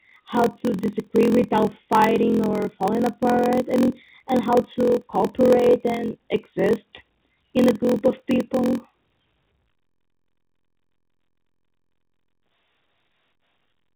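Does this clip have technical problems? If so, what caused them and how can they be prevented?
Yes. Throughout the speech, a block size mismatch (padded) is at work: one stage delivers blocks that fall short of the 1024 samples the next stage reads (a 0.938 speed ratio points to about 960), and each shortfall is zero-filled. That inserts a brief silence in every block, producing a steady buzz at 43.1 Hz, which fits 1024-sample blocks at 44.1 kHz. The audio runs at 0.938 times normal speed, and the telephone coding passes nothing above 4 kHz. To prevent it, make the writing and reading stages agree on one block size, or buffer between them so the reader waits for full blocks instead of padding.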